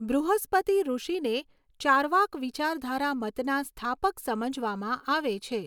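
No technical faults can be heard anywhere in the speech recording, and the signal stays steady and continuous throughout.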